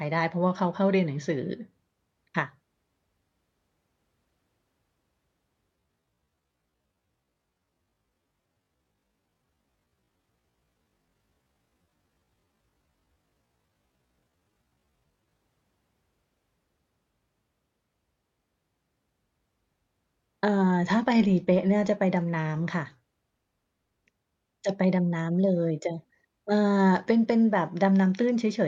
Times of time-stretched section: 5.74-15.42

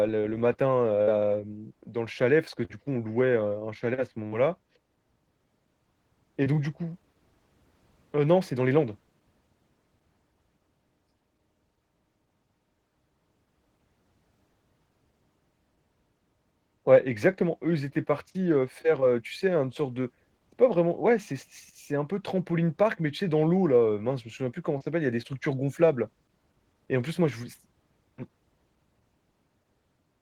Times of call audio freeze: none

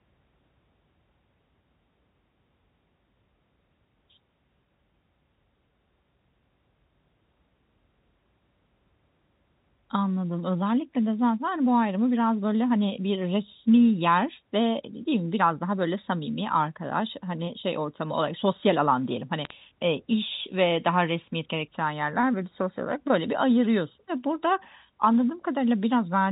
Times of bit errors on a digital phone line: 19.45-19.51

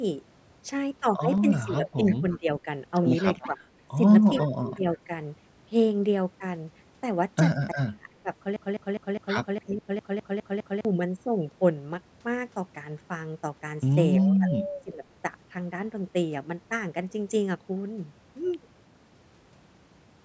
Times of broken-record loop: 8.56-10.85

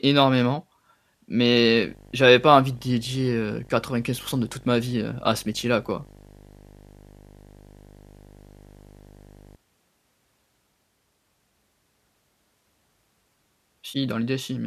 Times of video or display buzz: 1.56-9.56

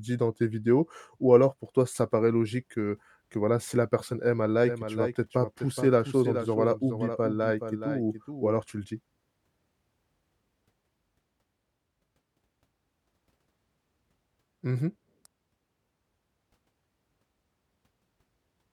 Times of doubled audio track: 4.63-8.55

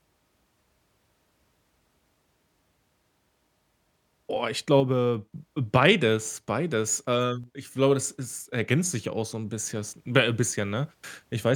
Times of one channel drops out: 4.80-5.33, 7.44-7.75

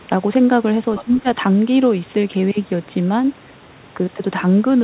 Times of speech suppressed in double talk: 1.03-1.27

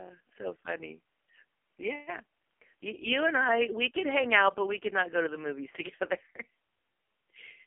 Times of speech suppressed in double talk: none

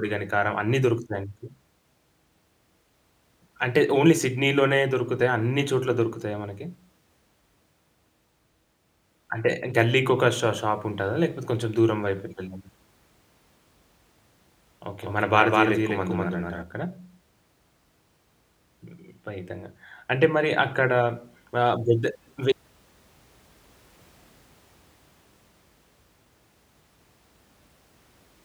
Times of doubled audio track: 15.02-16.62

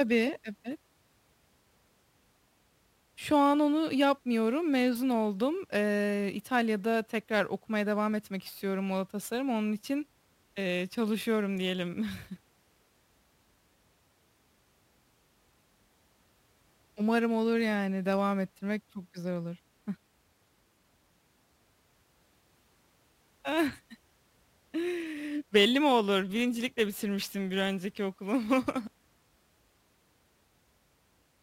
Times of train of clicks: none

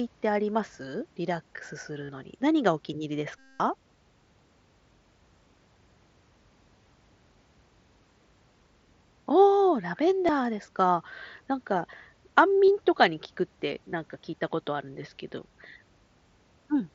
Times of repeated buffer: none

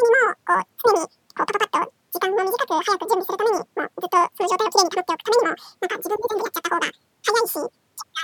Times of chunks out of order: none

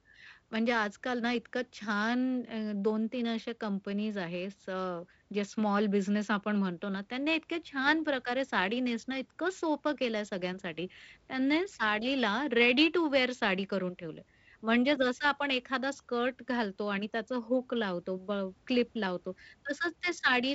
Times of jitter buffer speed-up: none

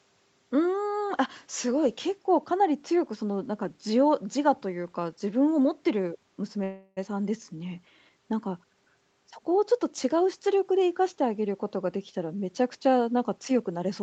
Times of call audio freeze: 6.63-6.99

